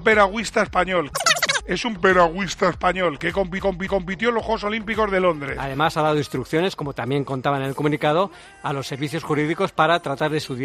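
At 3.60 s the CD sticks on one turn: a roughly 276 ms slice replays twice, muting briefly at each jump, until 4.15 s.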